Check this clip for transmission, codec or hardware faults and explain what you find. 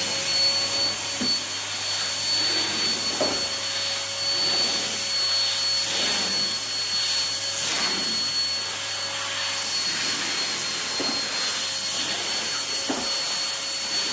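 No transmission, codec or hardware faults are audible here.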